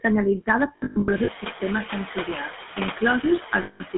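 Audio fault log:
Throughout: noise suppressor artifacts. The background is pulled down by about 6 dB in the gaps and comes back up under the speech. This clip has room noise that rises by about 14 dB around 1 s, ending only about 12 dB below the speech. So the suppressor has a lot to chew on.
Throughout: GSM full-rate codec. The speech is rough and buzzy, with a gravelly grain that is plainly audible. The codec rebuilds the voice from a vocal-tract model fed by a coarse pulse train, which fits the 13 kbps full-rate coder. The line band runs from about 200 Hz to 3.5 kHz. Nothing above 3.5 kHz gets through.
0.76–1.29 s: lost GSM frames. Just before "sistemes sensorials", the sound is repeatedly held on a harsh, metallic ring. The losses are scattered, not one block. About 360 ms goes missing across a span of 520 ms, with the longest run near a tenth of a second. Each gap is filled by repeating the last good frame. 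The result is a choppy, ringing stutter.
3.62–3.81 s: lost GSM frames. About 180 ms drops out near the end. The last good frame is stretched into a metallic hum. It rings rather than cutting cleanly to silence.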